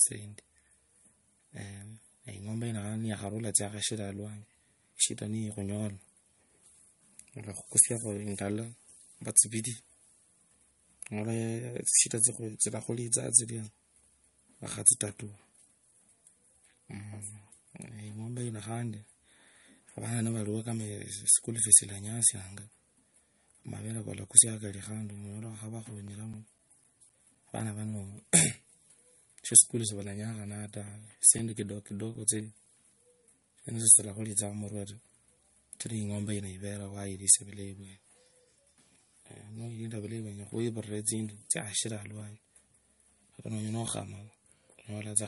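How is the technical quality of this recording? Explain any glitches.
The speech has technical faults: a plainly audible coded, watery quality throughout, and two separate runs of ticking.

Throughout, nothing sounds above 11.2 kHz, and the sound is swirly rather than simply dull. That points to MP3 compression, likely at a low bitrate around 48 kbps, where the encoder drops weak frequency detail frame by frame.

CD scratch ticks run from 25.82 to 27.86 s (9 ticks) and from 30.37 to 33.42 s (13 ticks). They come about four a second and vary in strength. The longest in the first run lasts around 10 ms, and in the second around 5 ms. A blemish defeats error correction once per disc turn, and that steady spacing sets them apart from random clicks.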